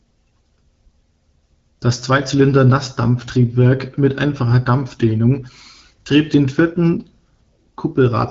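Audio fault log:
No fault to log for this audio.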